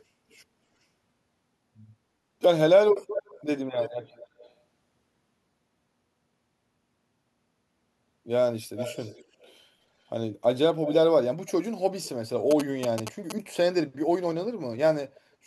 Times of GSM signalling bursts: 12.51-13.32

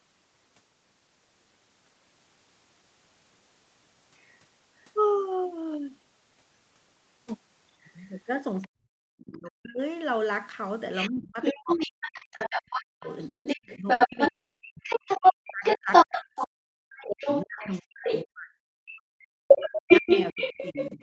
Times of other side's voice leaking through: 4.18-4.35, 8.62-8.67, 10.95-18.25, 19.48-21.02

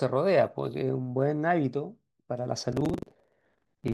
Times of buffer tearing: 2.69-3.93

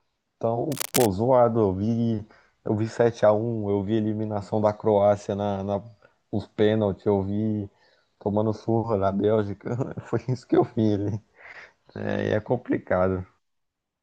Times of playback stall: none

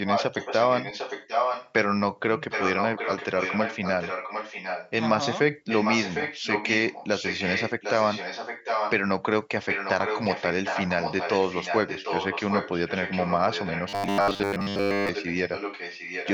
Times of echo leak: 0.05-1.72, 2.50-4.91, 5.68-8.94, 9.67-16.33

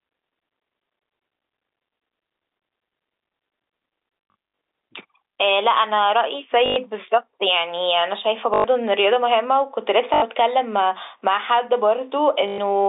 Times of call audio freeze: none

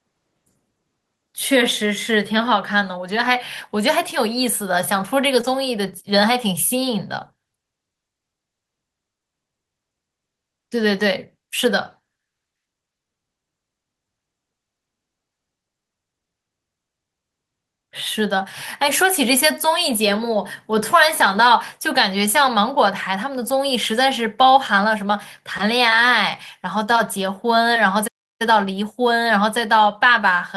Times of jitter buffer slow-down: none

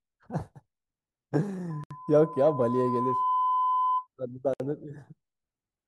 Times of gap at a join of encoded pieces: 1.84-1.91, 4.54-4.60

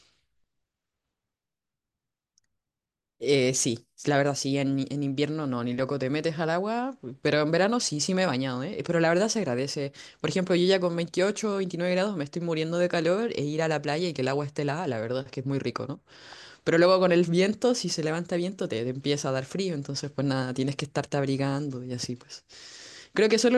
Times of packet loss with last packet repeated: none

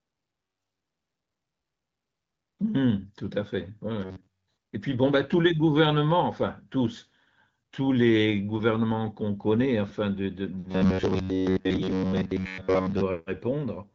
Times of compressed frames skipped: none

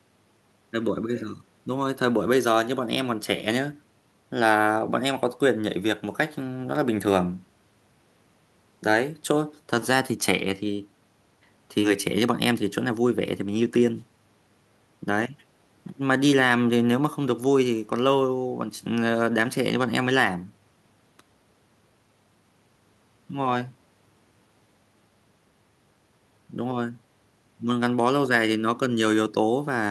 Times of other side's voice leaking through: none

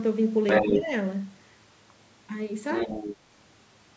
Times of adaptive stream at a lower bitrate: none

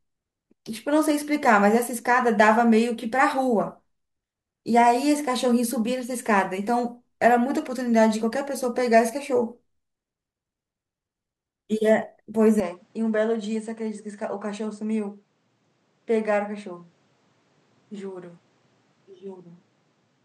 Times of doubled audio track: none

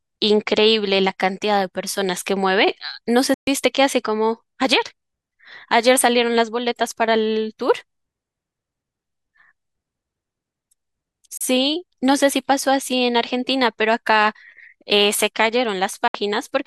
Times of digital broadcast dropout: 3.34-3.47, 11.37-11.41, 16.08-16.15

